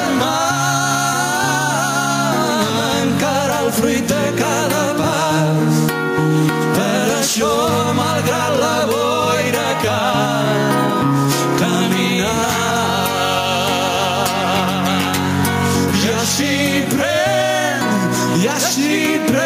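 Gain pumping runs through the whole clip: the gain ducks by around 5 dB under each loud sound. That's likely the gain set far too high, with a fast limiter clamping down on every peak, so everything sounds squashed.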